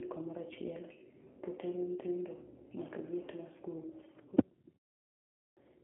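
Throughout, the G.729 codec is plainly audible. Speech is rebuilt from a vocal tract model and a few pulses per frame, which fits an 8 kbit/s VoIP line. Nothing passes above 3.8 kHz, and the sound is rough and synthetic rather than merely band-limited and muffled.

At 5.06 s, after a 0.36 s pause, a clipped start swallows about 0.51 s until 5.57 s. The output device slept in the silence and was slow to wake, so the speech bursts in abruptly, missing its opening sounds. Muted pauses, by contrast, only silence the gaps and lose no speech.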